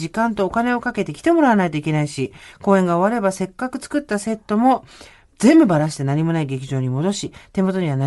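From start to finish, the speech carries damage of the kind left by Bluetooth LC3 compression, likely from an LE Audio link running at a modest rate, which fits roughly 48 kbps in short 7.5 ms frames. The codec discards much of the upper spectrum and substitutes generated noise there, so the voice takes on a breathy, grainy sheen in its high range. The artefacts are plainly audible across the whole clip rather than coming and going.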